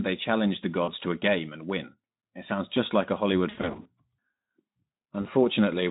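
Right after "they challenge the" at 0.83 s, you get VoIP packet loss concealed by the speech codec. About 40 ms drops out and the Speex decoder smears its last pitch into a fading buzz or noise. It happens again after "sounds just like a", broken up across 3.49 to 3.90 s, and briefly at 5.21 to 5.27 s.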